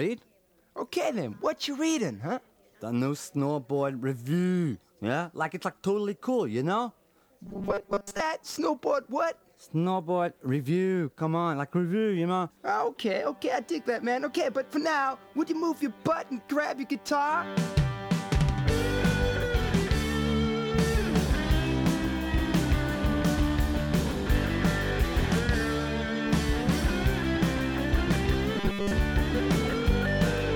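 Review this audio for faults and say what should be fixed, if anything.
There's robotic sound from repeated short buffers at 7.46 to 8.20 s and again at 28.57 to 28.92 s. A rigid 200 Hz buzz comes in, likely from a 5 ms stretch being looped for most of that time while real audio is skipped. Worth fixing by giving the playback path a bigger buffer or steadier feed.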